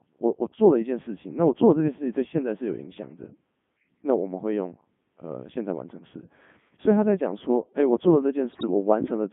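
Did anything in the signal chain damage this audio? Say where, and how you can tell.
Yes. The codec stage damages the entire clip: it is Codec 2 vocoder output, band-limited to about 150 Hz to 3.5 kHz, heavily robotic and buzzy. The decoder resynthesises speech from sine waves using only pitch, voicing, energy and envelope, which fits the 3.2 kbit/s mode.

Bit errors on digital voice radio hit the transmission link from 8.52 to 8.67 s, where the synthetic voice lurches in pitch, level and tone colour into a warbling burst. Corrupted parameter bits, at an error rate of roughly 7 percent, misset whole frames. The span fits about seven frames.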